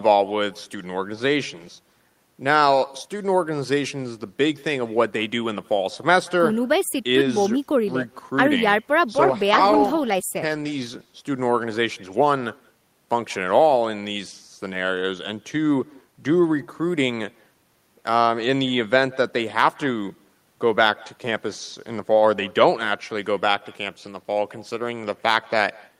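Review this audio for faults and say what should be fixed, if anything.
Echo with no canceller runs through the whole speech clip. The far end's loudspeaker feeds its microphone, so every phrase returns as a thin copy about 25 dB down, roughly a fifth of a second later. Enabling acoustic echo cancellation at the far end would remove it.

A call bitrate drop from 9.23 to 11.81 s turns the speech rough and muffled, bottoming out for about 1.27 s. This fits the encoder being pushed from about 32 to 15 kbps after the bandwidth estimate fell. Steadier network capacity or a higher minimum bitrate floor would prevent it.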